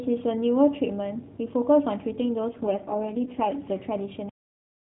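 From 2.50 s to 3.63 s the speech turns buzzier and more synthetic while keeping the same narrowband AMR-NB telephone bandwidth and continuity. This is an AMR rate drop, consistent with the codec stepping down from its 12.2 kbps mode to the 4.75 kbps mode, leaving too few excitation pulses for natural detail.

At 4.29 s the audio stops mid-sound and falls straight to digital silence for the rest of the clip, with no decay. This cut-off end means the final buffers were never written or played back, so the ongoing sound is severed abruptly.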